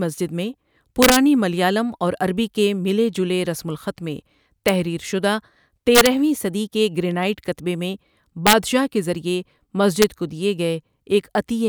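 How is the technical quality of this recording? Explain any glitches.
The speech recording has integer overflow on its loudest peaks. It occurs at 1.03–1.17 s, just before "ملیالم اور عربی کے". It recurs at 4.68 s after "جلے رسم الخط میں", at 5.95–6.07 s, at 8.47–8.53 s between "کے گرینائٹ کتبے میں" and "کے ذریعے", and at 10.02 s. The signal exceeds the integer ceiling by about 0 to 4 dB and wraps to the opposite extreme instead of limiting. Each peak becomes a violent, harsh crack, far sharper than clipping.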